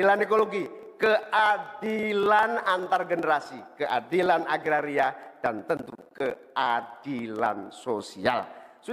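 Nothing goes wrong anywhere in the audio; there's no technical fault to point to at any moment.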